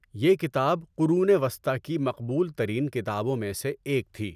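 No technical fault can be heard anywhere in the recording; the signal holds steady from its first moment to its last.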